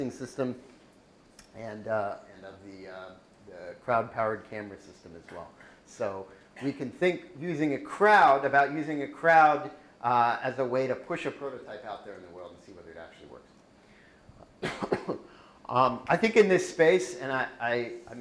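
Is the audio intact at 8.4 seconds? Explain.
Yes, the audio is intact at 8.4 seconds, with no fault of any kind at that moment.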